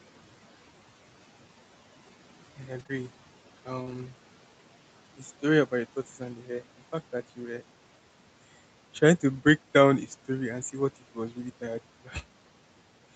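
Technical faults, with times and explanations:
2.79–4.00 s, scattered short gaps: about three brief holes in the packet stream, each no longer than roughly 30 ms, with about 80 ms of audio missing in total across this stretch. The receiver filled each hole by extending the preceding sound, rebuilding about 120 ms, so the speech stays intelligible but carries small ticks, smears and momentary hiccups, heard over the 8 kHz-limited Opus band and the low room noise.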